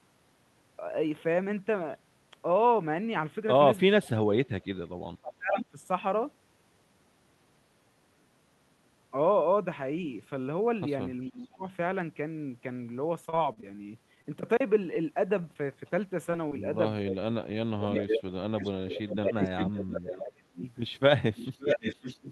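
Speech suppressed in double talk, 3.98 to 5.77 s and 11.29 to 11.66 s: the level sinks by up to about 35 dB, then about 20 dB. The likely cause is an echo canceller that, with both sides talking, could not separate talker from loudspeaker echo and turned both down.

Repeated packet loss (robotic sound), 13.25 to 14.27 s: seven gaps, the longest 40 ms, were each patched by extending the previous sound. The result is a choppy stretch with about 100 ms missing.

A short stall from a late packet, 15.42 to 15.46 s: the jitter buffer ran dry for 23 ms, so one sound is held slightly too long before resuming with nothing lost.

Short concealed packet loss, 15.54 to 15.57 s: 20 ms never arrived and was bridged by continuing the last sound, heard as a brief smear.

Echo leak, 15.87 to 15.91 s: a faint scrap returns, delayed 524 ms and about 35 dB below the speech, likely where the far side's canceller let some loudspeaker pickup through.

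Short concealed packet loss, 16.31 to 16.35 s and 16.49 to 16.53 s: two more 20 ms holes are filled with continued sound, each leaving a small smear or wobble.

Speech suppressed in double talk, 17.05 to 18.45 s: the voice drops by up to about 35 dB, likely while the other side talks.

Echo leak, 17.92 to 20.71 s: an echo delayed 542 ms sits only about 5 dB under the speech.

Speech suppressed in double talk, 19.16 to 20.62 s: during that echo, the voice dips by up to about 25 dB.

Echo leak, 21.36 s to the end: another strong echo, delayed 556 ms and about 5 dB down, trails the speech to the end of the clip.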